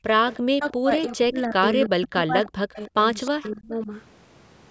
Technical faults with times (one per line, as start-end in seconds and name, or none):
0.00-0.11 background gated by the echo canceller
0.31-0.37 echo leak
0.54-2.90 speech suppressed in double talk
1.05-1.10 echo leak
1.84-2.07 echo leak
2.79-2.88 echo leak
3.25-3.49 echo leak
3.30-3.91 speech suppressed in double talk